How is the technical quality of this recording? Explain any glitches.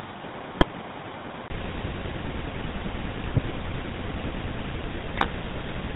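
The quality is poor: the speech is carried through a heavily degraded phone-grade chain, with an early stretch that sounds different and three bursts of digital corruption.

GSM full-rate codec, throughout the clip. The voice is rebuilt from a vocal-tract model driven by coarse, regularly spaced pulses, and the result fits the 13 kbps full-rate coder. It gives the speech a plainly audible buzzy, gravelly roughness and no real top end.

Input switched to a poorer device, from the start to 1.5 s. The sound there is duller and more boxy, with nothing above 3.8 kHz. The level is roughly 10 dB lower and carries a noise floor about 30 dB below the speech. A 20 ms gap marks the change at 1.5 s. The likely cause is the input moving between a weaker device and a better one.

GSM bit errors at 0.52 to 0.65 s, 3.36 to 3.54 s and 5.14 to 5.32 s. Corrupted bits reached the decoder and scrambled its filter, pitch and gain parameters for several frames, which fits an error rate of over 1%. 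The speech breaks into squawks, pops and gargling in those spots.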